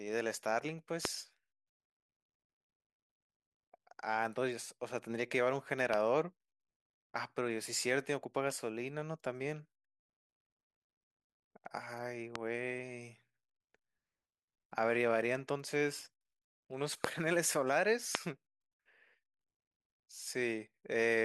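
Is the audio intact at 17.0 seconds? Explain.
No, there is a loud pop from 17.04 to 17.06 s, likely a sudden voltage step or pulse, such as from a switch or static, added to the signal. It sounds like a single sharp crack roughly 20 dB above the speech, which continues underneath.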